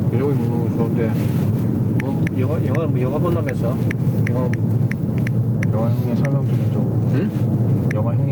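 Gain pumping runs through the whole clip. The gain swings by around 5 dB, pulling down under each loud sound, giving a breathing, squashed quality where loud and quiet parts sit close in level. The likely cause is input gain set far too high, with a fast limiter clamping down on every peak. On a waveform the envelope looks flattened.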